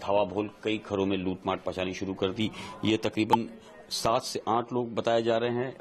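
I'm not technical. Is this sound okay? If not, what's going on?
No. At about 3.29 to 3.35 seconds there is a fault called compressed frames skipped. The audio is stored as a series of small compressed blocks, and at this point some of them were either missing from the file or rejected by the player as damaged. Playback jumps ahead, dropping roughly 20 milliseconds of sound, and the join where the two sides meet is heard as a brief glitch.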